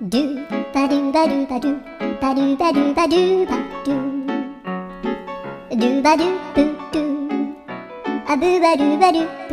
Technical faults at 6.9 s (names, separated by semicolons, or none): none